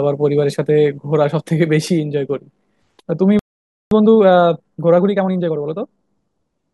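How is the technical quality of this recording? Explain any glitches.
The recording has three clear faults: a treble-heavy opening, a silent dropout, and a hurried stretch after it.

From 0.0 to 2.0 s, pre-emphasis is left on. The treble boost applied for recording was never undone. High frequencies sit about 8 dB too strong at 10 kHz relative to 1 kHz, which fits the CD 50/15 µs curve. The speech sounds thin, bright and sibilant.

From 3.39 to 3.91 s there is a playback stall. The speech stops dead mid-flow for about 0.52 s, then resumes. The likely cause is the player running out of data, or its thread being blocked, so output fell silent until it recovered.

From 3.91 to 5.99 s comes time-compressed catch-up. The player clears its backlog by cutting out small pieces and cross-fading the joins. The speech runs about 1.25 times normal speed at unchanged pitch.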